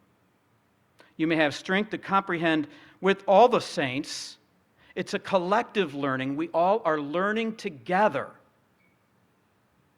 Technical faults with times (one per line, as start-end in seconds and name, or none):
none